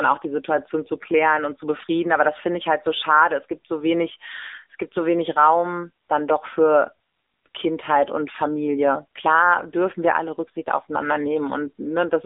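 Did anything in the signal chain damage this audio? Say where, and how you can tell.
Yes. The speech went through an AMR narrowband mobile codec, a codec-stage fault that lasts the whole clip. Nothing survives above 3.8 kHz, the band sits at about 300 Hz to 3.7 kHz, and the plainly buzzy, synthetic vocal-tract rendering points to a mode near 7.95 kbps.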